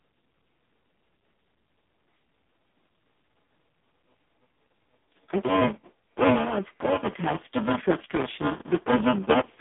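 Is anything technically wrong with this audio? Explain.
Yes. Two faults run through the whole clip.

Buffer tearing is present from start to finish. The writing program and the playback hardware have drifted out of step. They now cross inside every buffer period. About a third of each buffer replays audio from a few milliseconds earlier, with hard joins on both sides. The result is a robotic buzz at 375 Hz, which fits a 128-sample buffer. The buzz rides on the speech and vanishes in silences.

AMR narrowband mobile codec damage is also constant and heavy. This mobile speech codec samples at 8 kHz. It rebuilds the voice from a vocal-tract model excited by a few pulses per subframe. The line band runs from 150 Hz to 3.6 kHz, and nothing passes above 3.8 kHz. The speech sounds muffled, thin, buzzy and synthetic. That degree of damage points to the lowest bitrate mode, around 4.75 kbps.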